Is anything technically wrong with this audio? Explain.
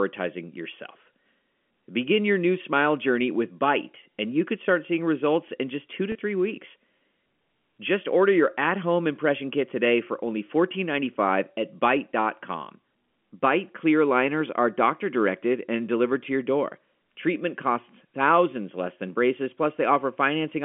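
Yes. At 6.12 to 6.15 s, between "in just two to" and "three weeks", the sound briefly holds and turns faintly buzzy for about 30 ms. This is packet loss with pitch repetition: a gap that fits a single lost packet was bridged by the receiver repeating the last pitch period. The narrow telephone band of G.711 coding, about 200 Hz to 3.4 kHz, is heard throughout, but that is the line format rather than a fault.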